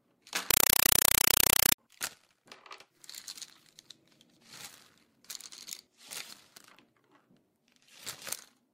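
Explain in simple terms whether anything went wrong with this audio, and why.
Yes. From 0.51 to 1.78 s the sound is replaced by loud, chattering static. This is a compressed stream played as audio. Dolby Digital data was sent as if it were ordinary sound, without decoding. Each 4 ms noise burst is one packed frame, repeating 31 times a second.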